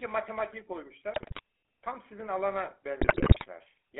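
The whole clip carries the GSM full-rate codec. The voice sounds buzzy and gravelly, confined to roughly 300 Hz to 3.5 kHz, which fits a 13 kbps phone channel. From 1.14 to 1.40 s, GSM bit errors corrupt decoded frames. The speech breaks into squawks, pops and gargling. The same GSM bit errors return from 3.00 to 3.47 s, with a longer burst of distorted, gargled frames.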